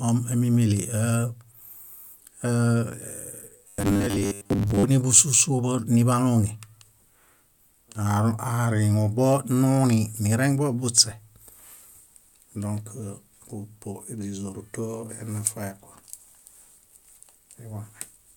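From 3.67 to 4.83 s, the speech collapses into robotic sound from repeated short buffers. The voice becomes a rigid, metallic buzz with a fixed pitch of 100 Hz. It still loosely follows the rhythm of the words. The likely cause is new audio arriving too rarely, so the playback keeps looping the last 10 ms chunk to fill the gaps. That loop length sets the 100 Hz buzz. Meanwhile most of the real audio in that stretch is lost.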